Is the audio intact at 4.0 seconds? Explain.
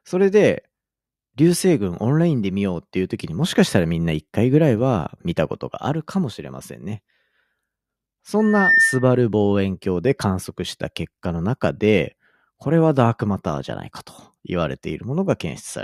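Yes, the speech at 4.0 seconds is intact, with no audible fault at that moment.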